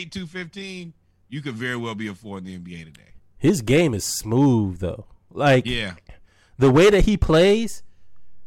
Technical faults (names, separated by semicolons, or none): none